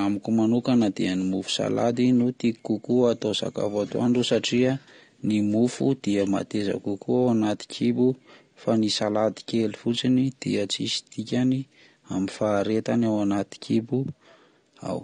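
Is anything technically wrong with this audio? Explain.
Yes. Throughout the speech, low-bitrate coding, likely AAC compression at around 32 kbps, discards and coarsely quantises high frequencies, leaving dull, smeared sound with fizzy, warbling sibilants.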